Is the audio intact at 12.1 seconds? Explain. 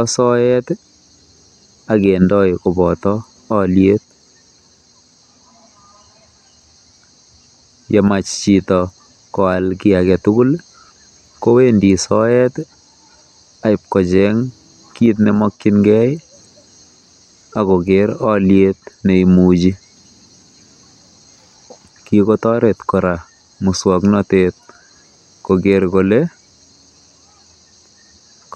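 Yes, the speech is intact at 12.1 seconds, with no fault at that moment.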